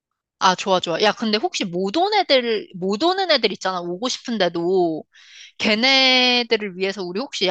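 No dropouts, glitches or distortion turn up anywhere in this speech recording.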